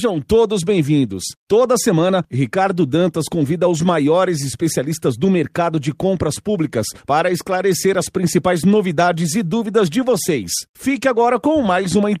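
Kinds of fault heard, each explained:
No technical faults can be heard anywhere in this speech recording. There is nothing to list under any kind of fault.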